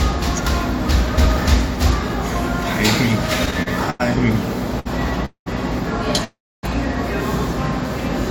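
From 3.46 to 4.01 s the sound shows repeated stalls (stutter): five jitter-buffer underruns fill 158 ms, the longest 93 ms, dragging the passage in held fragments. At 4.80 to 4.87 s a short stall from a late packet holds the sound for 58 ms, then resumes from the same place. Call audio freezes at 5.25 to 5.48 s and 6.24 to 6.65 s hold the last sound as it fades, then silence of 100 ms and 270 ms, likely from packets delayed in transit.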